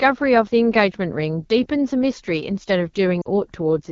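From the start, the speech carries the sound of the AMR wideband (HD Voice) codec. It codes the band up to 6.4 kHz with a pulse-excited model of the vocal tract. It fills the top band to 7 kHz with shaped noise. The damage is plainly audible. The speech sounds rough and raspy throughout. That points to one of the codec's lowest rates, around 8.85 kbit/s, where the model is too coarse to stay clean.

At 3.21 s, lost AMR speech frames interrupt the audio until 3.28 s. The gap lasts about 40 ms, which fits two lost 20 ms frames. Radio errors corrupted them, so the decoder could not use them. It repeated the last good pitch and vocal tract settings at falling gain. The sound briefly drops to near silence, then returns weak and rough for a moment.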